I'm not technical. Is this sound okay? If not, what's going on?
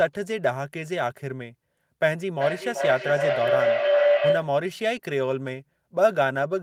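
No. From 2.25 to 4.62 seconds there is a feedback howl. The microphone picks up another device's loudspeaker in the same room, and each loop gets louder. It becomes a tone around 500 Hz, louder than the speech, with the loop repeating about every 0.4 seconds.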